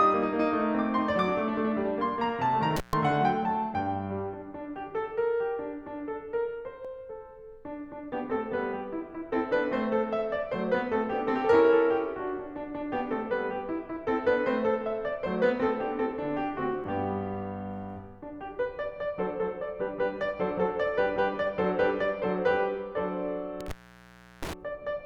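A loose cable or plug in this music recording is breaking the signal path for an instant, an intermittent contact fault. The music drops out with crackle at each edge, briefly from 2.76 to 2.93 s (about 130 ms open) and much longer from 23.61 to 24.53 s (about 710 ms open). The recorder is likely losing a sliver of audio each time it closes one 10 s chunk and opens the next, which is audio missing between chunks. A few milliseconds vanish and the two sides butt together, producing small skips at 6.85 s and 16.84 s, about 10 s apart.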